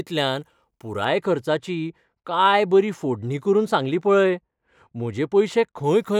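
De-emphasis applied wrongly dulls this speech clip from 1.04 to 5.84 s: a treble-cutting curve hit audio that carried no matching pre-emphasis, so the response slopes smoothly downward, about 14 dB lower at 10 kHz than at 1 kHz, leaving the sound muffled.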